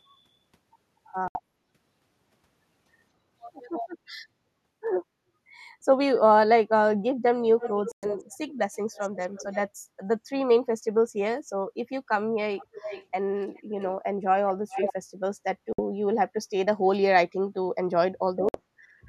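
At 1.28 s the speech cuts to silence for about 0.1 s, then resumes as if it had played on. That's likely a Bluetooth dropout, with packets missing the headphones. A similar gap recurs at 7.92, 15.73 and 18.49 s. Between 7.6 and 8.52 s, and again from 8.94 to 9.57 s, a quieter copy of the speech trails about 304 ms behind, likely echo leak from a loudspeaker the canceller didn't fully scrub. The second stretch is quieter than the first. It returns at 12.56 to 13.05, 13.55 to 13.9 and 14.69 to 14.93 s with a longer delay of about 395 ms, getting louder each time until it's close to the direct speech level.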